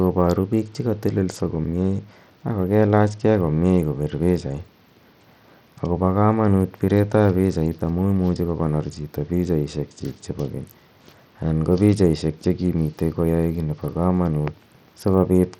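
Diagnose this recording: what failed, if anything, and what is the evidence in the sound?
The failure sits at the codec stage, and the damage runs through the whole speech clip. The top end is thin and unstable, with treble that flickers in and out, and a gritty, granular noise rides on the voice. The likely cause is Bluetooth SBC compression at a low bit pool, which fits a bitrate of around 80 kbps. With so few bits, the upper sub-bands are starved or dropped and the rest are coarsely quantised, leaving audible grit and aliasing.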